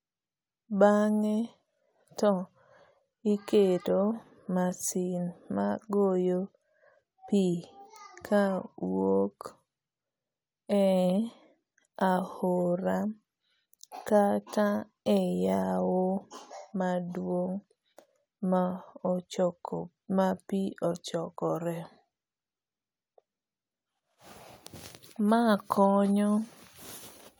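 A brief glitch cuts into the speech from 3.77 to 3.79 s. This is damaged data in a compressed stream: corrupted bytes made the decoder misread those frames and lose sync until it locked onto the next valid frame header.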